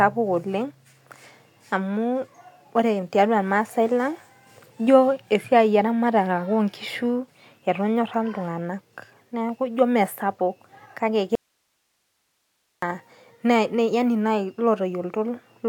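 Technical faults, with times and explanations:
11.35–12.82 s, audio dropout to a faint residue: the speech cuts off abruptly for about 1.47 s, leaving only hiss roughly 50 dB below it, then returns mid-flow. The likely cause is the signal feed breaking while the downstream path stayed live.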